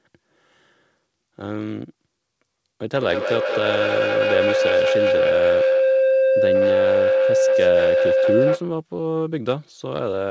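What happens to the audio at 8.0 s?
At 8.0 s you're near the tail end of a feedback howl that runs from 2.98 to 8.74 s. Two devices in the same room on the call are feeding each other, so each lap through mic and speaker comes back louder and narrows to a tone around 500 Hz. It pulses about every fifth of a second and peaks about 5 dB above the speech, then cuts off once the loop breaks.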